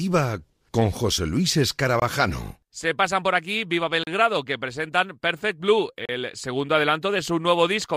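At 2.00, 4.04 and 6.05 s, gaps between stream segments every 2 s insert roughly 21, 35 and 34 ms of silence: hard-edged flat lines on the waveform, blank vertical strips on a spectrogram.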